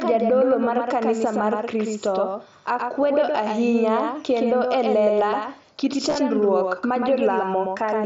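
Right from the start there's a doubled audio track: a clean copy trails about a tenth of a second behind, roughly 5 dB down, likely from a second, slower capture path. Then around 6.09 to 6.16 s, over the mSBC Bluetooth headset link, concealed Bluetooth headset packet loss shows up as several brief patched-over gaps, the longest about 15 ms, leaving buzzy flickers and a slight warble.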